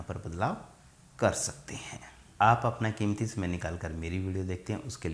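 No technical faults are audible.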